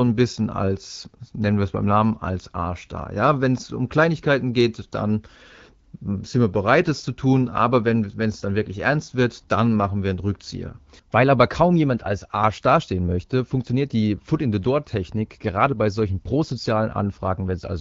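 Speech with no technical faults; it runs over the AMR wideband (HD Voice) codec, whose light coding character points to the 12.65 kbit/s mode.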